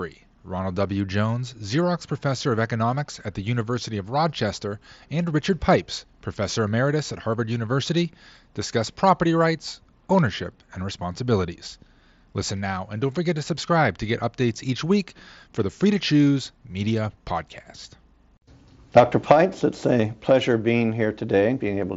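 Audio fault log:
Nothing to log here: the speech comes over a Bluetooth mSBC headset link at 61 kbps, and the light graininess it adds on louder sounds is normal for that codec.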